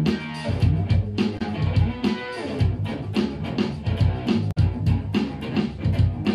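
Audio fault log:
1.35–1.42 s and 4.48–4.58 s: damaged data in a compressed stream. Corrupted frames make the decoder misread and lose sync, giving two brief garbled blips.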